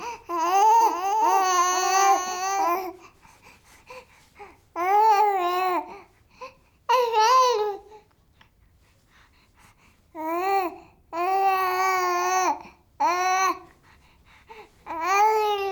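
From 0.81 s to 2.85 s the sound carries a doubled audio track. A second full-band copy trails the original by about half a second and sits roughly 5 dB lower. The likely cause is the same signal reaching the mix twice, once through a slower path. What separates it from a room echo or reverb is that the copy has no decay and no added ambience, and it switches on and off abruptly at both ends.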